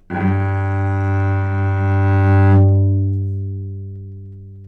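This clip contains sounds. From 2.29 to 2.64 s there is hard clipping. The signal overdrives a stage by about 3 dB, so its peaks are cut flat. Those squared tops add high harmonics. The peaks crackle.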